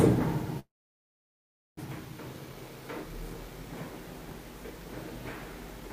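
At 0.59 s the audio stops moving forward: the last sound is stretched into a brief fading buzz, then about 1.1 s of silence, until the sound resumes at 1.79 s exactly where it left off. This call audio freeze is likely a stall in packet delivery that drained the jitter buffer. Nothing is lost; about 1.18 s of filler is inserted, delaying everything after it. A spectrogram shows a smeared, decaying band collapsing into a blank gap; the waveform shows a tapering tail and then a flat line.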